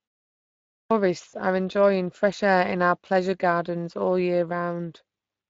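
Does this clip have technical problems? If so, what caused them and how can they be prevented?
Yes. Throughout, the speech sounds hoarse and grainy. This is Speex codec damage, and the coarseness fits a mid-range Speex setting near 20 kbps. To prevent it, use a higher Speex quality or a modern codec such as Opus.

At 0.80 s, after the opening silence, the audio starts abruptly, missing about 0.11 s before "are enjoying fresh air". This clipped start after a pause happens when the output device wakes from sleep too slowly to play the first sound. To prevent it, keep the audio device active, or feed it low-level signal, during silences.

From 1.29 to 1.34 s, there is a brief stretched, smeared patch that fades, and the voice stays weakened just afterward. This is VoIP packet loss concealed by the speech codec: the decoder extrapolated across a 40 ms gap, which fits two lost 20 ms frames. 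To prevent it, use a jitter buffer with forward error correction or redundancy on the network path.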